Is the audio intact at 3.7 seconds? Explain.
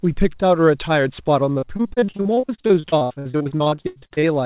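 No. Repeated packet loss runs from 1.52 to 4.34 s. Gaps of up to 88 ms are patched by extending the preceding sound, giving choppy, robotic speech that shows as smeared, repeated blocks on a spectrogram.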